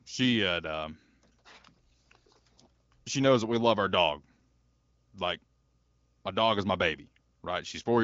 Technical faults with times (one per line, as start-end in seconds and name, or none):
none